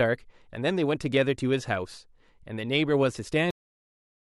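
A cut-off end hits at 3.51 s: the speech stops mid-sound and drops straight to digital silence for the remaining 0.87 s. The final stretch of audio was never written or played out, so the signal has no natural decay, just an abrupt truncation.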